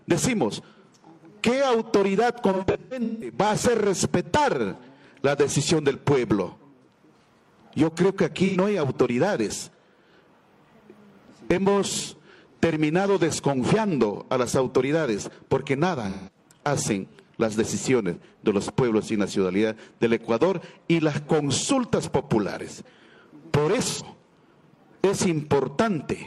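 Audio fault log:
2.53–24.02 s AAC frame loss with concealment. Brief smeared, noisy patches at 2.53–3.36, 8.46–8.57, 16.09–16.38 and 23.88–24.02 s. The decoder rebuilds lost frames from the last good spectrum.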